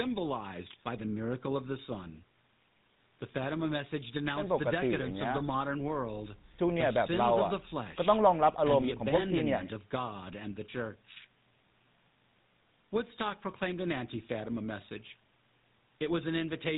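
GSM full-rate codec throughout, consistent with 13 kbps: speech rebuilt from a vocal-tract model and sparse pulses, nothing above 4 kHz, plainly audible buzzy, gravelly roughness.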